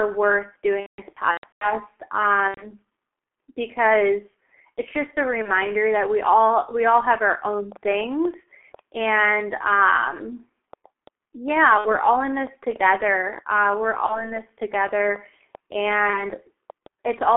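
Speech heard through a G.723.1 codec for its whole length. Everything is held inside a telephone band of roughly 300 Hz to 3.4 kHz, and the damage is heavy: voices come out muffled and hoarse with smeared consonants. The coder's very low rate, which fits about 6 kbit/s, and its slowly updated voice model produce this constant, even dullness. The codec is different from the brief dropouts below because it never comes and goes.

VoIP packet loss concealed by the speech codec breaks in at six points. The worst stretch runs from 0.80 to 1.72 s, where about 480 ms of audio is missing across roughly 0.81 s, with the longest single gap near 180 ms. Shorter losses follow at 2.48 to 2.69 s (90 ms), 5.42 to 5.51 s (30 ms), 11.78 to 11.97 s (60 ms), 14.06 to 14.35 s (30 ms) and 16.10 to 16.25 s (30 ms). In each gap the decoder repeats its last pitch and filter at falling gain, so the sound stretches into a fading buzzy tone or coloured noise and stays weak for a moment afterward. 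That smooth fade separates it from the clicks.

A train of clicks runs from 6.91 to 17.10 s, about fifty sharp pulses at an uneven pace near 4.6 per second. They reach roughly the level of the speech and tick through pauses as well as sound. The cause is likely electrical interference or a faulty connection or power supply. These clicks are instantaneous pops of much the same shape, unlike the drawn-out, decaying tone of concealment.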